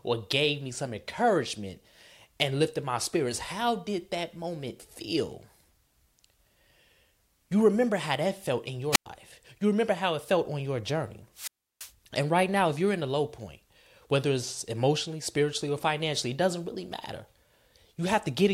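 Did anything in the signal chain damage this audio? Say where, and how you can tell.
Yes, wireless microphone squelch dropout, at 8.92 to 9.06 s and again at 11.34 to 11.93 s. The damage happens in the analogue radio link, before conversion. Each event has a short burst of hiss as the FM carrier weakens, then near silence when the receiver's squelch cuts the output. The first hole lasts about 102 ms and the second about 334 ms. The speech then resumes, which shows the signal fading and recovering.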